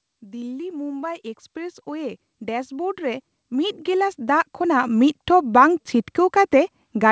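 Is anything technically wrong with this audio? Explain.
Yes, there's one problem. From 1.53 s to 5.57 s you get automatic gain rising. The call's gain control decided the input was too quiet and kept turning it up, by about 14 dB in total over roughly four seconds. Because that gain applies to the whole signal, the speech and the background noise behind it swell up together. The noise floor creeps forward along with the voice, rather than the voice simply getting clearer. The top end stopping at 8 kHz comes from the call path itself and fits a wideband codec such as G.722.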